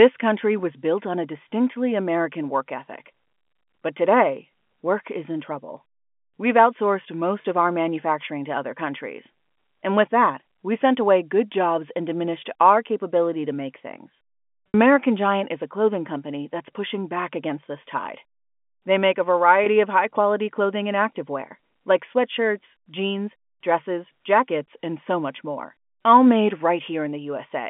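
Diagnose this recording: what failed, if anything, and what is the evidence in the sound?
The network stage dropped packets, and the receiver covered the gaps with packet loss with pitch repetition. Brief buzzy holds at 7.42–7.44 s and 19.64–19.66 s fit a single lost 20 ms packet. The 60 ms gap at 14.68–14.74 s shows the repeated pitch period fading out before the speech cross-fades back in.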